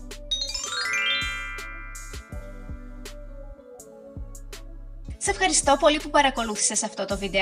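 The signal stays steady throughout, with no audible technical faults at any point.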